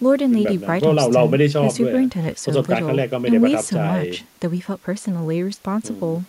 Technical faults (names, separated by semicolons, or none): none